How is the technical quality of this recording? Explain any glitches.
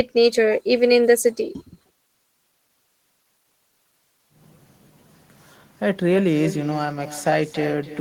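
The recording is compromised by one fault that runs through the whole speech clip: echo with no canceller. From start to finish, every phrase returns roughly 300 ms later as a fainter duplicate, about 13 dB below the direct sound. The far end is evidently playing the call through a loudspeaker, its microphone is picking that up, and nothing subtracts it before the signal travels back. The copy sounds thinner. On a spectrogram, each syllable's harmonics reappear as a weaker ghost shifted right. The waveform shows small trailing bursts after each peak.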